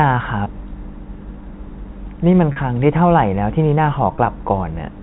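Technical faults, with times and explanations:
0.44–0.46 s, 2.52–2.56 s, 4.16–4.18 s: packet loss with pitch repetition. Gaps of 20, 40 and 20 ms are filled by repeating the last pitch period, producing a brief held, buzzy tone in the telephone-band audio.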